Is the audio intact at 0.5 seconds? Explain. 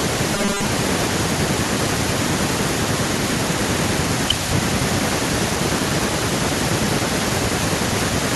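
No. From 0.35 to 0.65 s the speech becomes a rigid, metallic 200 Hz buzz, robotic sound likely from repeating a 5 ms buffer in place of most of the real audio.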